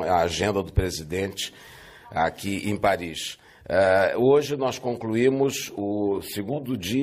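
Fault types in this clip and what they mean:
No audible faults are present anywhere in this recording.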